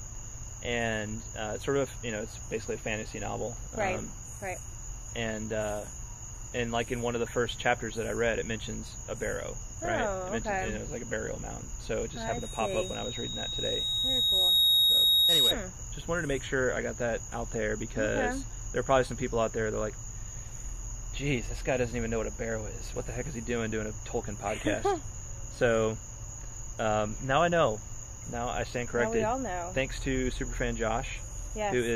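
From 12.12 s to 15.55 s a single piercing tone at 3.8 kHz creeps in and swells over roughly three seconds until it stands around 10 dB above the rest of the sound, then stops. This is loudspeaker feedback squeal: the microphone was picking up the loudspeaker it was driving, and at 3.8 kHz the loop gain rose above one, so that frequency kept reinforcing itself until the loop was broken.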